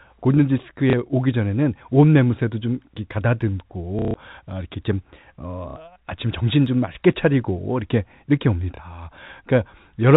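Packet loss with the last packet repeated interrupts this telephone-band speech recording: the receiver filled each gap by replaying the most recent packet until fresh ones arrived. The gaps fall at 0.90 to 0.93 s, 3.99 to 4.14 s, 5.70 to 5.76 s and 8.76 to 8.79 s, and their lengths fit 30 ms packets. The replayed chunks seldom join in step with the pitch. The longest run, 150 ms near 4.0 s, produces a robotic stutter buzzing at about 33 Hz. The G.711 coding keeps everything below 4 kHz.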